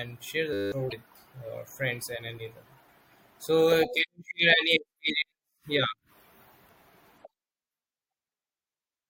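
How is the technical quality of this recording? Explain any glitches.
Two glitches close together near the start of this speech clip. From 0.53 to 0.72 s a steady 100 Hz buzz replaces the sound: a system hang loop, where a 10 ms buffer repeated while the system froze, costing about a fifth of a second. From 0.88 to 0.93 s comes a brief glitch, caused by damaged data in a compressed stream that threw the decoder off sync until it found the next frame.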